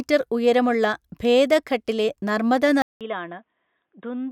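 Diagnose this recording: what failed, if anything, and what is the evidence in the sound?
The input was likely switched to a poorer device at the driver level at 2.82 s. After a silence of about 0.19 s, the speech returns duller and boxier, with nothing above 3.8 kHz, roughly 10 dB quieter, and carrying a faint new background noise far below the speech.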